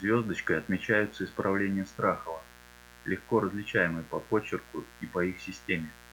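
Mains buzz runs from the start of the speech to the end, sitting roughly 25 dB below it. Sharp switching spikes, of the kind a dimmer, a rectifier or a poorly shielded cable lets into the path, arrive twice in every 60 Hz cycle. Their harmonics stack up well into the kilohertz range, so instead of a smooth low hum the result is a constant, raspy, edgy buzz under and between the phrases.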